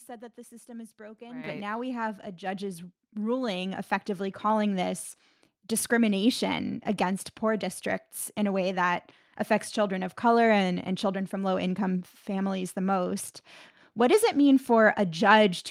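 Speech, with three faults. At 1.44 s, after "system is broken right", the microphone volume steps up by about 10 dB. Voice and background jump together. The call software found the input too quiet and raised the device level in one go. It steps up again by about 3 dB at 2.46 s, after "now we have a". At 13.28 s, after "low income families the", a 5 ms block of digital silence cuts in. The output buffer likely went unfilled, and the hard edges make a tick.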